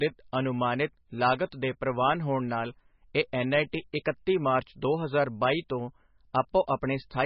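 From start to finish the speech carries heavy MP3 compression damage, likely from encoding at a very low bitrate, somewhere around 18 kbps. Starved of bits, the encoder removes everything above 5.6 kHz and drops weak frequency content that flickers in and out between frames, giving a muffled, watery, swirling quality with smeared consonants. On a spectrogram the energy stops at a flat ceiling near 5.6 kHz, and below it sits a patchy, blocky texture of gaps.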